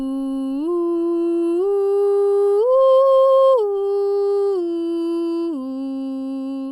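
Listening to this music clip, nothing stood out as a technical fault at any point.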